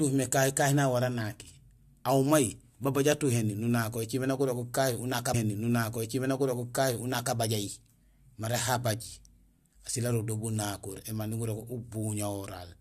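After "nak gurogul kahi unaak", a small blip at 5.33 s, then about 2.0 s of speech replays until 7.34 s: a stream segment repeated, fetched or queued twice by the player.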